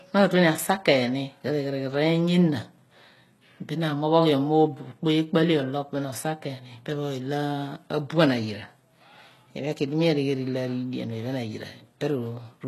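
Throughout, the treble sounds bright but synthetic: s sounds come out gritty and lispy, and nothing sounds above about 12.3 kHz. This is likely HE-AAC compression at a very low rate, which fits around 16 kbps, with the upper band rebuilt from copied lower frequencies.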